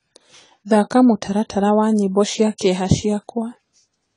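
AAC compression damage runs throughout this speech clip: nothing survives above 10 kHz, and the remaining spectrum sounds smeared and fizzy. The cause is likely AAC-LC coding at a low bitrate, consistent with about 24 kbps, where coarse quantisation drops and thins high-frequency bands.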